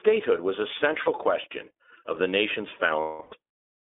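iLBC codec coding runs through the whole speech clip, with the band held between 300 Hz and 3.6 kHz. Each 20 ms frame's excitation is coded on its own, which fits iLBC's 15.2 kbps mode, and it leaves the speech plainly rough and slightly synthetic, with no content above the line band.

Lost iLBC frames first appear from 1.01 to 1.09 s, a 40 ms loss. The decoder fills the gap by repeating the last pitch cycle blended with noise, giving a brief buzzy, held vowel before clean decoding returns immediately.

Lost iLBC frames return from 3.00 to 3.34 s, a 320 ms loss. Here the concealment stretches the repeated pitch cycle and noise much longer, so a breathy, droning vowel sound fades out across the gap before the independently coded frames restore normal speech at once.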